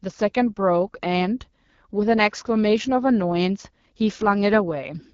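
From start to finish, this speech carries the sound of the AMR wideband (HD Voice) codec at a low rate. It points to 8.85 kbit/s, the second-lowest mode. The codec models the voice with a pulse-driven vocal tract filter up to 6.4 kHz. Above that, it substitutes shaped noise up to 7 kHz. At this rate the pulse coding is too coarse. The damage is plainly audible: the speech turns rough and raspy throughout.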